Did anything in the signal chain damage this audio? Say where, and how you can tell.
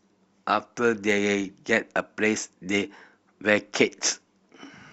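Yes. A bit error spike occurs at 1.11 s in this speech clip: a single-sample tick peaking at about -27 dBFS, heard as a sharp, broadband click unrelated to the surrounding sound. That points to the digital stage, in storage or on a digital link rather than in analogue wiring or a converter. One bit flipped, so that sample's value jumped by a power of two and snapped straight back on the next sample.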